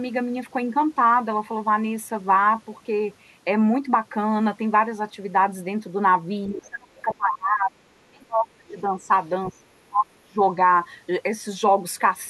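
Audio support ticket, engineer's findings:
Speech suppressed in double talk, three stretches: 6.48–7.87 s, 8.1–9.1 s, 9.48–10.4 s. Near-end speech dips hard, deepest around 30 dB. Each stretch lasts about one to one and a half seconds. Likely cause: echo canceller or suppressor during double talk. It could not separate local speech from loudspeaker echo while the far end talked, so it attenuated both.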